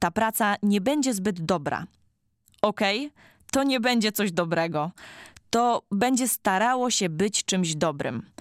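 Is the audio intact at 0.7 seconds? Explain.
Yes, the speech at 0.7 seconds is intact, with no fault audible at that moment.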